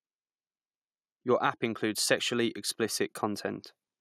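A speech recording in which the level swells gradually from 1.8 s to 3.53 s, voice and background rising together by about 4 dB. That slow, even climb is automatic gain rising: the gain control judged the input too quiet and turned it up.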